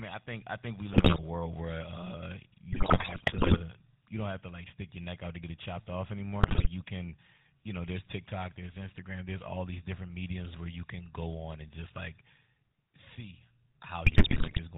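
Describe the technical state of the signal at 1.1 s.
At 1.1 s the speech breaks into squawks, pops and gargling, part of a burst of GSM bit errors running from 0.93 to 1.19 s, just after "think I think we" and before "world where uh". Corrupted bits in the filter, pitch and gain values are warping the spectrum and spiking the level frame by frame. The damage spans about 13 frames of 20 ms and points to a heavy error rate of around 5 percent.

Underneath, the whole clip carries the GSM full-rate codec, which fits its 13 kbps rate. The sound is buzzy and gravelly with nothing above 4 kHz, because the codec rebuilds the voice from a vocal-tract model driven by sparse, regularly spaced excitation pulses, and that damage is plainly audible.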